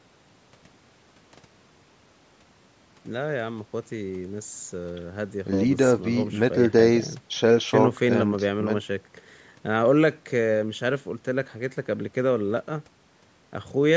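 Nothing goes wrong anywhere in this speech clip, which has simply passed through ordinary call microphone processing that trims the deepest bass and leaves nothing above 8 kHz, just as that path normally does.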